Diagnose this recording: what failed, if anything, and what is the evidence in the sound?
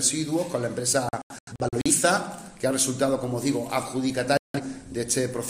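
A digital broadcast dropout at the receiver's decoder. From 1.09 to 1.91 s the sound breaks into short muted holes, 341 ms lost, the longest 85 ms. From 4.37 to 4.60 s it mutes again for 171 ms. Failed frames were silenced and their content lost.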